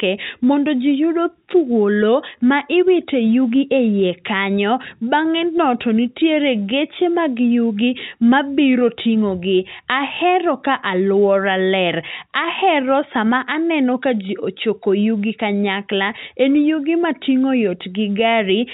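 Nothing goes wrong anywhere in this speech recording, which simply carries the narrow, phone-line sound of ordinary G.711 telephone coding.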